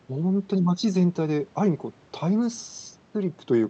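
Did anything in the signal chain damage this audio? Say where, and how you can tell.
No, nothing in the signal chain damaged this speech; it went through an Opus call path that was working normally.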